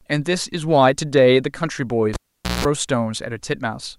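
A speech recording with a cable pulled and plugged in between 2.14 and 2.65 s. A pop at 2.14 s marks the live lead coming out. The sound then drops to near silence for about 0.46 s. As the plug goes back, only its tip touches at first. That leaves the input open to pickup, giving roughly 0.18 s of 60 Hz mains buzz. A second pop follows as full contact returns the signal.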